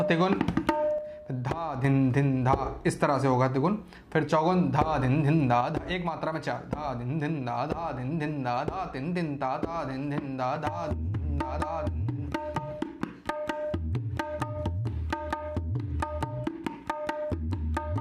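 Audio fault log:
0.98–1.84 s and 5.61 s to the end, one channel drops out: the level falls abruptly by about 6 dB at each start, recovering at 1.84 s and staying down from 5.61 s on. This is likely one stereo channel going silent. Once the channels are summed to mono, material shared by both loses half its contribution, hence the 6 dB drop, while anything present only in the missing channel vanishes.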